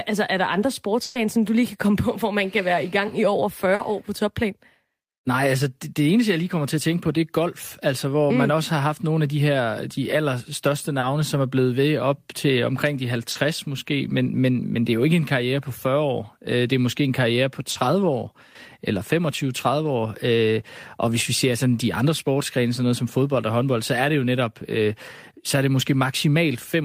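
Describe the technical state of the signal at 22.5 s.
At 22.5 s the speech signal is intact, with no technical fault audible at that moment.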